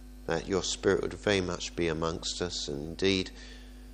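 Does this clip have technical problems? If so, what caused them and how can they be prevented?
No, there are no technical faults to report, so there is no cause to trace and nothing to prevent.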